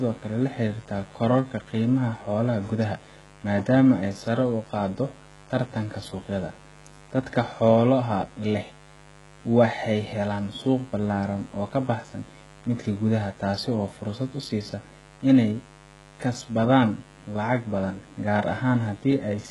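From start to finish a mains buzz runs under the speech, built on 50 Hz with a dense stack of harmonics reaching into the kilohertz range, sitting roughly 25 dB below the speech. Sharp switching spikes twice per cycle make it raspy rather than the smooth, near-pure hum of plain magnetic pickup.

Throughout, the treble is bright but synthetic, with nothing above 11.5 kHz, and s sounds come out gritty and metallic. This is likely HE-AAC compression: the high band is rebuilt from copied lower bands, and the heavy damage fits a rate near 12 kbps. Ordinary low-pass dulling would lose brightness instead.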